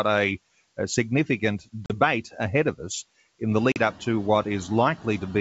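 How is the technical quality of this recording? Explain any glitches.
The recording has two technical faults: a constant hiss from low bit depth, and two brief dropouts from packet loss on an ADPCM call.

Low bit depth with dither runs through the whole clip. The audio has been reduced to about 7 bits, with dither added before rounding, so the rounding error becomes a steady white noise instead of distortion. That noise sits only about 20 dB below the speech. It is heard as an even, constant hiss under everything, with no grittiness or crackle on louder passages.

Packet loss on an ADPCM call occurs twice, from 1.86 to 1.91 s and from 3.72 to 3.77 s. Each gap loses 40 ms of audio, which fits two lost packets, and the gap is filled with silence, so it opens and closes with hard edges. When audio resumes, the decoder's adaptive predictor and step size no longer match the sender's. The speech comes back slightly distorted and settles within some tens of milliseconds.

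The room's own background noise rises by about 17 dB around 3.5 s and stays about 21 dB under the speech. The 64 kbit/s G.722 wideband coding adds at most a faint upper-band hiss of its own.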